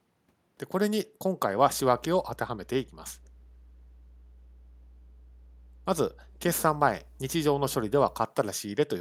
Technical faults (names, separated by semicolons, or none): mains hum; echo leak